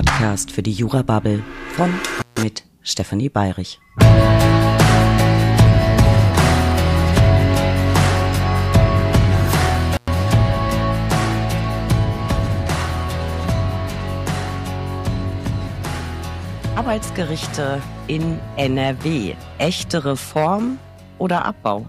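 Intermittent contact at 2.17 to 2.41 s and again at 9.93 to 10.08 s. Each time a loose plug or cable connection briefly breaks the signal path. The sound drops out for about 147 ms in the first event and about 106 ms in the second. Scratchy crackle marks the moments the contact separates and reconnects, and faint hiss remains while the line is open.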